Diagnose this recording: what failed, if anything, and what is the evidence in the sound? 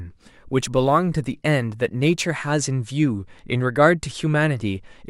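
Sample clock jitter at the converter, from the start to 2.25 s: a signal-dependent roughness around 35 dB below the speech, swelling on loud, bright syllables and gone in pauses. Unlike a steady noise floor, it tracks waveform slope, consistent with timing wobble of a few microseconds.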